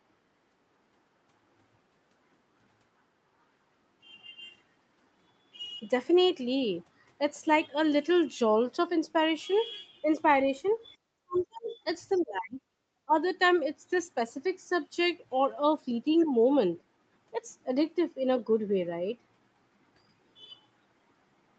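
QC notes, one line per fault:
11.17–11.75 s, 12.18–12.75 s, 13.05–13.14 s: speech suppressed in double talk. The echo canceller, likely confused by both sides talking at once, turned the talker down. Speech dips by up to roughly 40 dB.
11.35–11.43 s: other side's voice leaking through. Echo cancellation likely left some loudspeaker sound in the microphone signal. A brief, faint scrap of a second voice sits about 25 dB below the talker.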